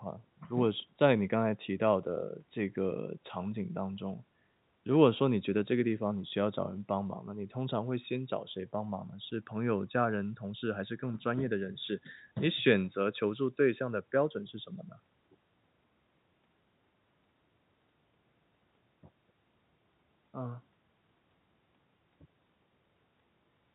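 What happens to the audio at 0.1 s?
Nothing goes wrong at 0.1 s: the speech comes through intact, with the narrow, telephone-like band of its G.711 coding and no dropout, click or distortion at that point.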